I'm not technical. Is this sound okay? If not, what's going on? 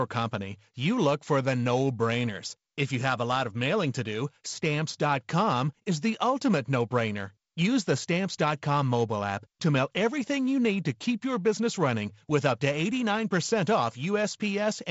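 Yes, nothing in this speech stood out as a problem on listening.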